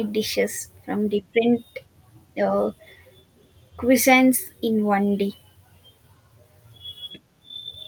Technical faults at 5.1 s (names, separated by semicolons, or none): none